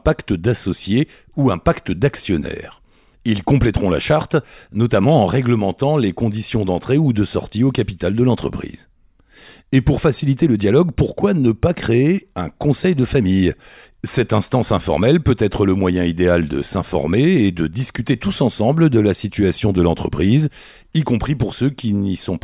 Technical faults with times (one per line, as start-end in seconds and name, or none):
none